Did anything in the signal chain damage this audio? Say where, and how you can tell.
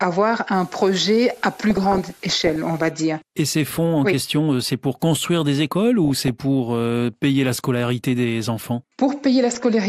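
Yes. Throughout the speech the sound is dull and muffled, with a gurgling, granular roughness on the voice and upper frequencies that seem to drop in and out. That pattern points to MP2 compression at the codec stage, likely at a rate around 80 kbps. Layer II divides the spectrum into 32 sub-bands and shares out a bit budget. At this rate the top bands lose their bits and switch off, and the remaining bands are coarsely quantised.

From 0.54 to 2.90 s a steady, even hiss sits under the speech, around 30 dB below it, with no harshness or grit that follows the level of the voice. This is low bit depth with dither, introduced at a sample-format conversion, and it fits roughly an 8-bit stage. Adding dither before rounding to so few levels turns the quantisation error into a constant white-noise floor instead of distortion that tracks the signal.

Two bursts of burbling break through the speech, from 1.64 to 2.56 s and from 6.04 to 6.31 s. 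The second falls just after "pour construire des écoles" and before "pour euh payer la". This is DAB burbling, damage arriving over the transmission path into the decoder. Under weak reception, a small share of bit errors slip past the error correction into the MP2 data. Corrupted samples then put short blips of noise into single sub-bands, and corrupted scale factors make sub-bands jump in level for up to a frame.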